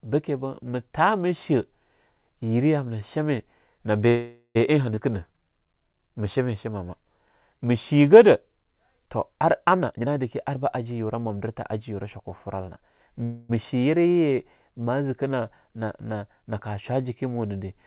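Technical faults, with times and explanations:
4.08 to 4.57 s, call audio freeze: the speech halts and the last sound is stretched into a fading buzz for about 0.47 s, with the final 80 ms falling to silence. It then picks up exactly where it stopped, so nothing is lost. Packets were likely held up and the jitter buffer ran dry. On a spectrogram the final spectrum smears out flat and fades, and the waveform thins to a flat line before resuming.
4.95 s, skip ahead: the speech jumps forward with only a 15 ms join, and roughly a tenth of a second of audio is gone. Audio that was already queued was dropped to pull the delay back. The waveform shows an abrupt splice, and in the spectrogram the harmonics break off and restart somewhere else.
5.11 to 5.92 s, jitter buffer slow-down: the speech runs at 88% speed with its pitch unchanged, and sounds are drawn out because 104 ms was added by repeating pitch periods to rebuild the buffer's reserve. 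On a spectrogram the harmonic lines stay level but stretch longer, and the waveform shows repeated, near-identical cycles.
9.78 to 13.08 s, jitter buffer speed-up: the speech runs at 113% speed with the pitch held steady and sounds hurried. Short pitch-period pieces, roughly half a second in total, were cut out to shrink an oversized buffer delay. The spectrogram shows syllables squeezed closer together with level harmonics, and the waveform has tighter gaps between bursts.
13.24 to 13.51 s, call audio freeze: the speech stops and the last sound carries on as a fading buzz for 0.26 s, never dropping to full silence, then resumes with nothing missing. This was likely another brief packet hold-up. The spectrogram shows a flat, fading smear and the waveform decays without reaching zero.
Across the clip the G.711 mu-law call path at 64 kbps leaves nothing above 4 kHz, so the spectrogram has a hard ceiling at that frequency.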